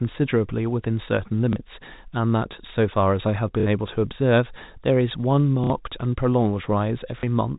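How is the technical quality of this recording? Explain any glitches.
The glitches are four short dropouts, patched by packet loss with the last packet repeated, sitting on top of G.711 telephone coding that keeps everything under 4 kHz. The repeats land at 1.53 s and 7.2 s, each about 30 ms, and at 3.6 s and 5.64 s, each about 60 ms. The receiver fills each gap by replaying the last chunk it got, which fits 30 ms packets, one lost in the shorter events and two in the longer ones. The loop doesn't line up with the speech pitch, so the longer ones pick up a brief robotic stutter buzzing around 33 Hz.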